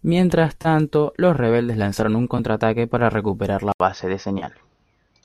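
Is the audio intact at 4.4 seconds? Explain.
No. At 4.4 s there is AAC frame loss with concealment, from about 4.39 to 4.44 s. Roughly 30 ms of coded audio is missing, which fits three lost frames. The decoder covers the gap by re-using the last good spectrum with scrambled phase, so a brief smeared, noisy and phasey patch replaces the real signal. On a spectrogram this looks like a short stretch of blurred, frozen harmonics that lose their fine structure. The waveform shows a small section with a changed texture but no hard dropout.

This happens inside a longer change that began at 3.72 s, just after "para recuperar": an input switched to a poorer device, likely to another microphone or a headset profile. An 80 ms silence marks the switch. After it the sound is duller and boxier, with nothing above 6.3 kHz and a faint new background noise. The level stays about the same. On a spectrogram the top band is cleanly cut at 6.3 kHz from 3.72 s onward, just after a thin gap across all frequencies.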